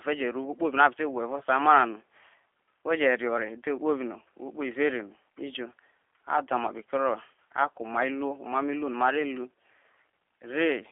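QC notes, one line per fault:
throughout: G.729 codec. The speech is rough and slightly synthetic, confined to about 300 Hz to 3.4 kHz. This fits an 8 kbit/s G.729A coder rebuilding each frame from a filter and a few pulses.
1.39–1.42 s: VoIP packet loss concealed by the speech codec. A short smeared patch is heard. The decoder bridged a 20 ms gap, pointing to two lost frames, by extending its last pitch and filter at falling gain.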